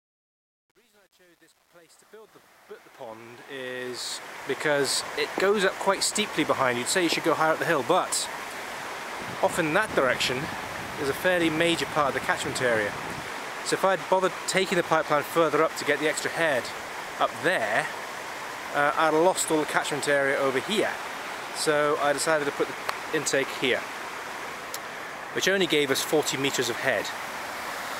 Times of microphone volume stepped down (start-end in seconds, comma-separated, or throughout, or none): none